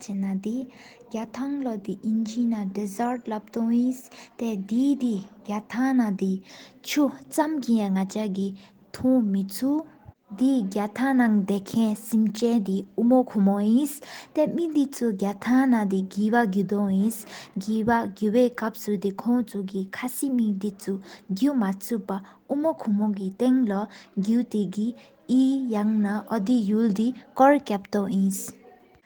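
Speech clip with no technical faults; the Opus voice compression is in hybrid mode and keeps the full band up to about 20 kHz, with only light coding texture audible.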